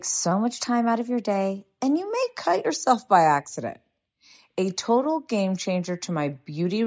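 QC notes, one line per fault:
0.31–2.23 s, drift correction step: clock-matching software likely stepped playback rate up 6.2% at once, so speech runs faster and 104 cents sharp, then snaps back.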